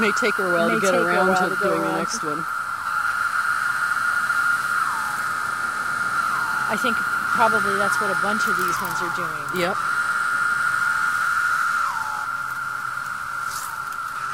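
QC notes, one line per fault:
0.17–14.23 s clock slip clicks: faint regular ticks, roughly every 0.15 s. Each tick is a single dropped or repeated sample, likely from unsynchronised clocks about 150 ppm apart.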